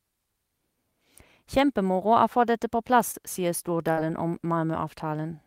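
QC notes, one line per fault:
3.11–3.15 s, short concealed packet loss: Right after "få dette på plass" there's a little smear lasting about 40 ms. A chunk of the stream didn't arrive in time, so the receiver stretched the sound it had just played to cover the gap. It invented about 21 ms of audio from that tail, and about 20 ms of real audio is gone. It then blended back into the real signal, which leaves a wobble where the splice sits.
3.91–3.99 s, burst of packet loss: This one's longer. Just after "dette på plass sier" the speech turns into a held, fading sound for about 56 ms, and then jumps ahead. Several packets in a row went missing. The receiver kept extending the last bit of audio, tapering it down over about 56 ms, while about 60 ms of the actual speech never arrived. That's why it sounds like a brief held, fading sound followed by a skip.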